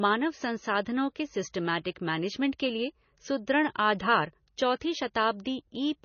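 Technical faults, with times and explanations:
Throughout, MP3 compression: the speech has nothing above 6.6 kHz and a heavily watery, swirly texture, likely from an MP3 encoder starved of bits, as at about 24 kbps. It cuts the treble at a fixed point and lets weak frequency lines flicker between frames.
4.80 s, pre-echo: a hiss of about 12 ms leads a sharp attack, softening its onset. The encoder spread quantisation noise across the whole block, so noise sized for the loud sound also filled the quiet moment before it.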